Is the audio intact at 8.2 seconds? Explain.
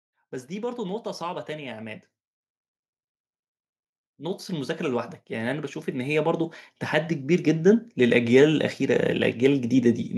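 No. From 7.26 to 9.09 s, automatic gain rising is under way: the gain control, judging the input too quiet, lifts its gain by about 4 dB over nearly two seconds. Speech and background swell together, gradually rather than in one sudden step.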